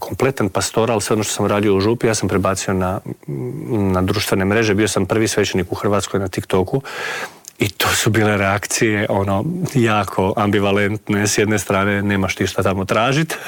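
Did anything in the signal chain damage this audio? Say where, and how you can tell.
No, nothing damaged this audio.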